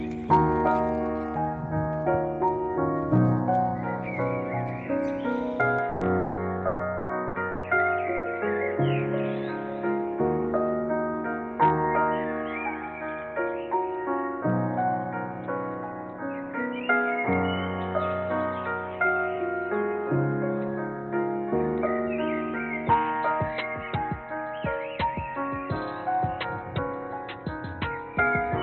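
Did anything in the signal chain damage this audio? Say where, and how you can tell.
Yes. From 5.79 s onward the sound abruptly dulls, with nothing above 4 kHz and no gap at the change, at the capture stage: the input likely switched to a poorer device.

Between 5.89 and 7.66 s the sound turns choppy and robotic. That is repeated packet loss on the network: six gaps, the longest 180 ms, were patched over, concealing 41% of that stretch.

At 8.17 to 8.26 s a brief held smear replaces 60 ms of audio, then playback resumes further on, a burst of packet loss filled in by the receiver.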